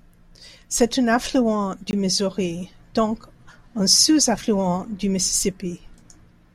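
A speech recording with two faults. Just after "un affluent", a block of digital silence runs from 1.91 to 1.93 s: 20 ms of samples dropped to zero with no fade, heard as a short hole, as when an output buffer isn't filled in time. From 5.14 s to the end, sample clock jitter appears: the converter clock wanders by somewhat under a microsecond, so samples land early or late and the error follows the waveform's slope, adding a roughness roughly 35 dB below the speech that is strongest on loud and bright sounds and drops away in pauses.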